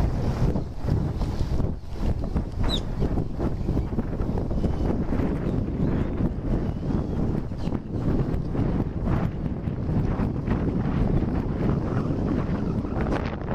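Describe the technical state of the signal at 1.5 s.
At 1.5 s the signal is intact, with no audible fault at that moment.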